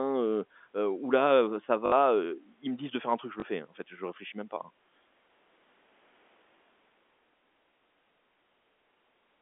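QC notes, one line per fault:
1.86–1.92 s, packet loss with last packet repeated: about 60 ms of audio went missing (likely three 20 ms packets), and the receiver looped the last good packet until fresh audio arrived. The repeats buzz at 50 Hz, a brief robotic stutter. A plain dropout would leave silence instead.
3.40–3.42 s, packet loss with last packet repeated: a single 20 ms repeat, heard as a small blip rather than a sustained buzz. It is easy to mistake for a one-off click on the 250 Hz to 3.5 kHz telephone-band G.711 channel. The splice gives it away, with one short repeated grain of sound instead of an isolated spike.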